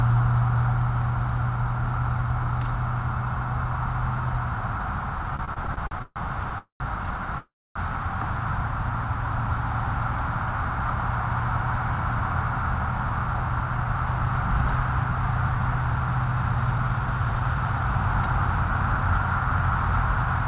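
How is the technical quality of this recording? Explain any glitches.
The recording has a cluster of network playback glitches between about 5.4 and 7.8 s. It is heard through narrowband call audio with nothing above 4 kHz, which fits a 64 kbps G.711 A-law path.

Repeated stalls (stutter), 5.36 to 6.52 s: packets kept arriving late, so the jitter buffer ran dry ten times and the receiver stretched the last sound over each wait, the longest 137 ms. That adds about 0.32 s of filler, 28% of the stretch, so the sound drags and stammers but nothing is lost.

Call audio freeze, 6.58 to 6.82 s and 7.38 to 7.77 s: packets were likely held up in transit, emptying the jitter buffer. The sound hangs as a fading continuation, drops to silence for about 100 ms and 250 ms respectively, then resumes where it stopped, adding 218 ms and 374 ms of delay.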